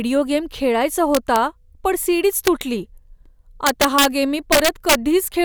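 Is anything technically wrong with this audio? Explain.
Yes. The speech has integer overflow in four bursts: 1.15 to 1.36 s after "गेम खेळायचा", 2.47 to 2.61 s, 3.67 to 4.05 s before "गेम मी", and 4.52 to 4.95 s after "गेम मी". Loud peaks run past the integer ceiling, from about 0 dB over up to about 6 dB over, and wrap to the opposite extreme instead of being held there. This produces violent cracks rather than clipping's flattened, buzzy distortion.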